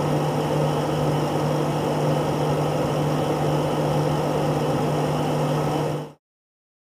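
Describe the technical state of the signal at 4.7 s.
The audio is intact at 4.7 s, with no fault present at that moment.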